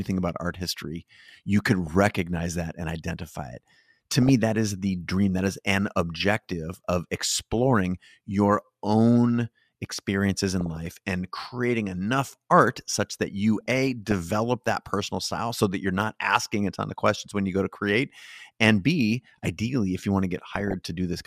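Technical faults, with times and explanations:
1.69–1.87 s, 4.22–4.29 s, 7.23–7.56 s, 10.61–10.77 s, 13.61–14.12 s and 20.49–20.73 s: DAB burbling. Short bursts of burbling sit over the speech, with the longest stretch around 13.6 s. It sounds like weak reception, where a fraction of a percent of bits slip past the error correction into the MP2 stream. Corrupted samples then put short blips of noise in single sub-bands, and corrupted scale factors make sub-bands jump in level for up to a frame, so you hear that burbling.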